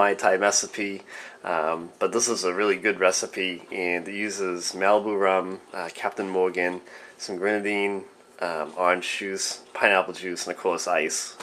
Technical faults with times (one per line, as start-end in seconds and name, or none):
none